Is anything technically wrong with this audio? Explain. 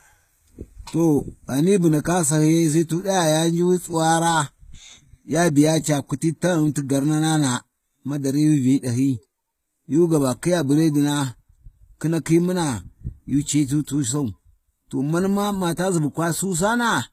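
Yes. Throughout the speech there is plainly audible coding damage. The upper spectrum is rebuilt, not original, and it stops at 14.9 kHz. The likely cause is HE-AAC compression at a low bitrate, about 20 kbps, with treble copied upward from lower bands. S sounds turn gritty and metallic.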